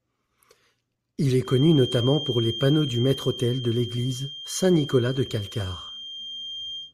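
From 1.39 s to the end, the loudspeaker-to-microphone loop is likely sitting right at the edge of feedback, sustaining one frequency without building up. The result is a feedback whistle: a thin, steady 3.2 kHz tone roughly 15 dB under the speech, swelling and fading slowly in level throughout.

At 5.88 s, Bluetooth LE Audio frames were lost over about 10 ms, which fits a single dropped 10 ms LC3 frame. The decoder filled the gap by repeating the previous spectrum with scrambled phase, so the speech there turns briefly into a short noisy smear rather than a clean cut. The LC3 compression itself likely leaves only a light grainy edge.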